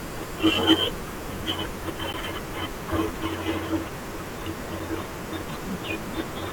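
A sharp tick at 2.13 s and another at 4.80 s: each is a block of digital silence, about 10.7 ms and 3.8 ms, where the sound cut out abruptly, likely from an unfilled output buffer. The first fits a 512-sample buffer.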